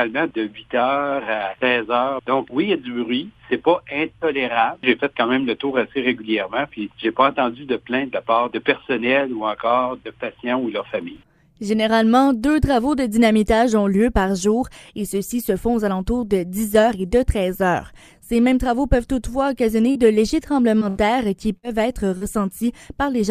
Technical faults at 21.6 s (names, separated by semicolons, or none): burst of packet loss